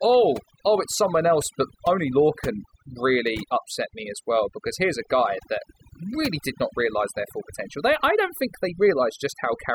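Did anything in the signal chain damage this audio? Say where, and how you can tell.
Yes. Overdone noise removal runs through the whole speech clip, from start to finish, and points to a noise suppressor in the call-processing stage set far too aggressively. Between phrases the background drops to near silence scattered with twinkling specks. The suppressor is cutting individual frequency bands hard whenever they sit close to its noise estimate, so leftover noise bins flicker on and off while the quieter components of the voice are stripped away with them.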